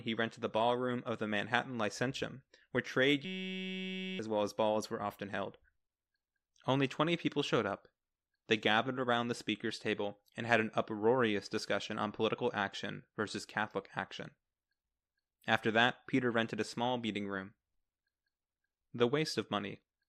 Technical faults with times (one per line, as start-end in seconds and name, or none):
3.25-4.19 system hang loop